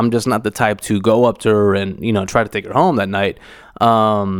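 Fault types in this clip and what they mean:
There are no fault types in this clip to describe.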